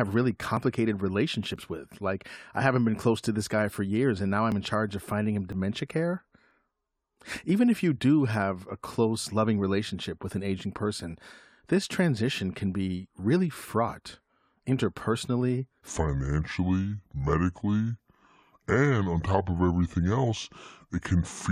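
Right at the start there's an overlap between stream segments, heard as small clicks or micro-skips at 0.57, 1.56, 2.54, 3.53, 4.52, 5.52 and 7.50 s. Each one drops somewhere between 7 and 17 ms of speech. The near-one-second spacing gives it away: the segments' time stamps overlap, so the player trims the doubled stretch from audio that wasn't actually repeated, and the waveform jumps. Good landmarks are the skip just before "I haven't been close", the one right after "charge of finding him", and the one just before "if you do have".

From 15.87 s to the end, the section plays at the wrong speed, at 0.7 times normal. Because speed and pitch move together, the speech suddenly turns slow and heavy and drops by about seven semitones, close to a fifth. That shift happens abruptly, with no gradual slide. The likely cause is that this last stretch was fitted to the wrong clock during editing or playback.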